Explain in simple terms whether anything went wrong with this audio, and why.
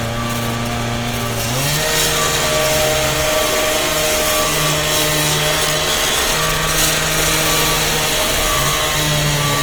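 Something did go wrong, and it runs through the whole clip: it sounds like Opus compression was squeezed pretty hard. Tones come out grainy, rough and a bit noisy rather than clean, likely because the encoder was filling in detail it couldn't afford with noise-like texture.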